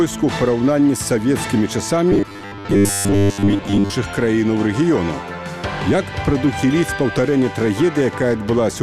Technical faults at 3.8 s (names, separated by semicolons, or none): robotic sound from repeated short buffers